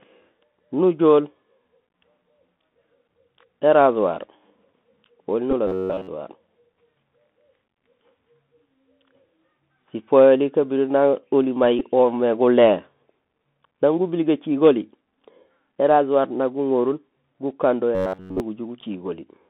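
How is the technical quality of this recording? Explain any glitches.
The recording has clear technical damage: a narrowband, plainly harsh headset sound throughout, two brief buzzes, and two short stretches where the speech turns mechanical and buzzy.

Across the whole clip the audio is boxed into a telephone-like band of roughly 150 Hz to 3.5 kHz, with s sounds coming out scratchy and a granular hiss sitting beneath the speech. That is the Bluetooth CVSD headset codec, running at 64 kbps. It encodes each sample as a single up-or-down bit with an adapting step size, so fast, loud high-frequency detail outruns the step and distorts, and nothing above about 4 kHz survives at all. Here the codec damage is plainly audible.

At 5.51 s and again at 11.79 s there is a brief buzz. These are Bluetooth headset packets repeated: voice packets between headset and phone went missing, and the chip decoded the previous packet's bits a second time in their place. 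The first covers about 15 ms, which fits four lost packets. The second covers about 11.2 ms, which fits three. Because the repeat recurs every 3.75 ms, each run gives a short buzz near 267 Hz until good packets return.

From 5.67 to 6.09 s, and again from 17.95 to 18.40 s, the speech becomes rigid and metallic, locked onto a buzz at 93.8 Hz while still loosely tracking the syllables. This is robotic sound from repeated short buffers. The likely cause is audio arriving too seldom, so the software keeps replaying its last chunk and skips the real material. The buzz rate fits a buffer of about 10.7 ms. Most of the first stretch is repeated material, and practically all of the second.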